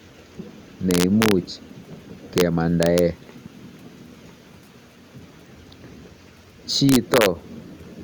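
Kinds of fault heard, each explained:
Integer overflow: a sum or gain let sample values run past the integer ceiling, so they wrapped round to the opposite sign instead of being held at the limit. The speech bursts into harsh cracks on loud peaks near 0.9, 2.4, 2.8 and 6.9 s, even with only about 1 dB of overdrive.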